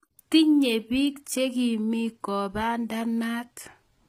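Throughout the speech, the treble sounds rebuilt rather than real, and nothing reaches above 15.4 kHz. The damage is plainly audible. The cause is likely HE-AAC compression, and the sound fits a low bitrate near 24 kbps. Upper bands are copied from lower ones, so s sounds turn gritty and metallic.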